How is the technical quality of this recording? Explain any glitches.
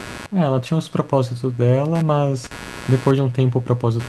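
The technical quality is compromised by a single fault: computer activity noise runs under the speech for the whole clip. It is a buzzy, scratchy chatter pulsing at around a hundred times a second, sitting roughly 20 dB below the voice. Processor, graphics or mouse load shifts the ground the audio circuit shares with the computer, and those current swings leak in. Unlike steady mains hum, it flickers and changes character with the machine's workload, not with the speech.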